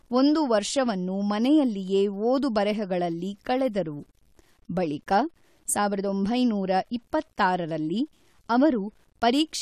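Speech, with quantisation error around 40 dB below the signal throughout, likely low bit depth without dither, fitting 9-bit truncation; unlike background hiss, this error follows the signal itself.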